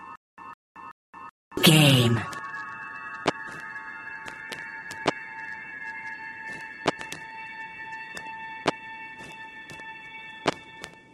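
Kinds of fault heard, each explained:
Stutter with silent gaps: Right from the start and running to about 1.57 s, a short burst of roughly 156 ms keeps coming back, three times, each followed by about 223 ms of dead digital silence, so it ticks along at a steady 379 ms cycle. It's already going when the clip opens. The likely cause is a stalled player or stream replaying its last fragment on each retry, and whatever should have played there is simply gone.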